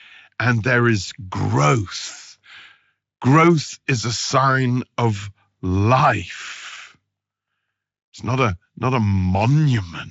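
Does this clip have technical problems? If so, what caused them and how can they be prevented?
No, there's nothing here that needs fixing, so there's nothing to prevent either.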